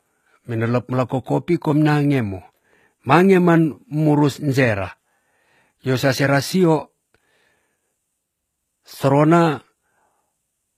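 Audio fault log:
throughout HE-AAC compression: the speech was likely passed through an HE-AAC encoder at a low rate, fitting roughly 20 kbps, so the treble is rebuilt from copied lower bands rather than coded. S sounds turn gritty and metallic, and nothing reaches above 14.9 kHz.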